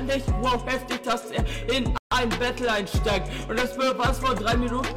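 At 1.98 s the sound drops out until 2.12 s, a gap at a join of encoded pieces lasting about 139 ms. Two separately encoded segments were butted together without trimming, so the end-of-file frame padding of the first and the start-up delay of the second both remain as silence. The dropout's edges are smeared by the codec, and the sound resumes exactly where it stopped.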